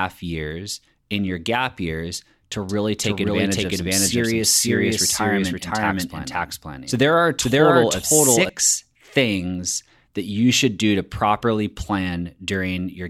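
From 2.69 s, after "your gap years to", a doubled audio track runs until 8.49 s, before "things that you should". An equally loud copy trails about half a second behind. It likely comes from a second, slower capture path.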